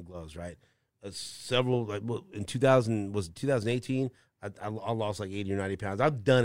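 No technical faults are audible.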